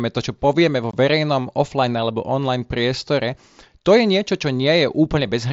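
At 0.91 to 0.94 s, unconcealed Bluetooth headset packet loss leaves a 22.5 ms abrupt-edged hole in the speech, which fits three lost headset frames.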